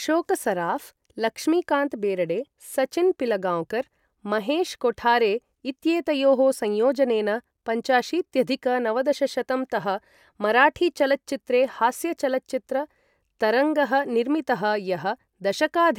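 Speech recording with no audible technical fault anywhere in the clip.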